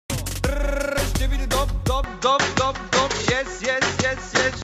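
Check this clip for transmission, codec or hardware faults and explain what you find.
One fault is present. From 2.04 s to the end, the sound turns duller. Nothing above 7.6 kHz remains, and a faint new background noise appears. There is no gap and no jump in level. The likely cause is an input switched to a poorer device, one with a narrower band and its own noise floor.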